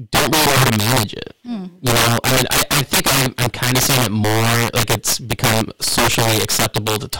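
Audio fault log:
Throughout: integer overflow. Loud speech peaks break into violent, harsh cracks, far sharper than ordinary clipping. The signal is pushed about 12 dB too hot, and around 7% of samples exceed the integer limit and wrap to the opposite extreme instead of being held at full scale.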